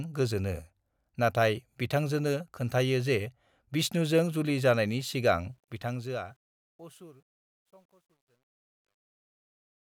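Right after "विष्णुजों जुलि जानाइनि सिगां", at 5.47 s, the fade-out starts and the speech picks up truncation distortion on the fade that runs to the end at 9.81 s. The fade stage is dropping low bits with no dither, roughly consistent with an 11-bit path. So as the level sinks toward the smallest step, the waveform collapses into coarse square steps. From about 6.81 s on it's at its worst: gritty.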